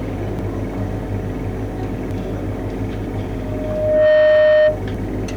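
From 3.40 to 4.81 s there is loudspeaker feedback squeal. A microphone picks up its own loudspeaker, and the loop gain exceeds one at 615 Hz. That tone swells over most of a second. It then sits roughly 10 dB above the sound.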